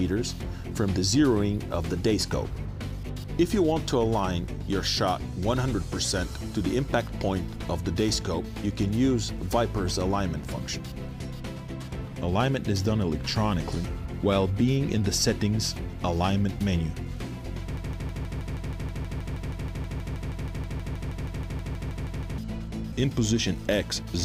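A broken-record loop takes over from 17.77 s to 22.38 s: one 159 ms fragment repeats exactly, back to back, 29 times, and whatever should have played in those four and a half seconds is gone. On a waveform the stretch shows an identical shape copied at a steady 0.16 s spacing; a spectrogram shows the same vertical pattern tiled like wallpaper. The likely cause is a stalled player, encoder or stream resending its last buffered piece.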